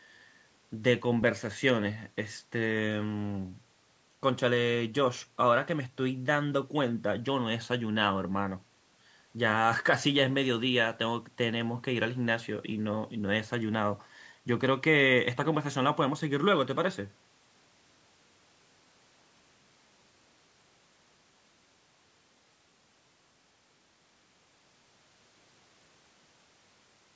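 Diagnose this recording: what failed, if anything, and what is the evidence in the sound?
Nothing failed in this recording: there is no evidence in the sound of any fault, and the call microphone processing, which leaves nothing above 8 kHz, is working normally.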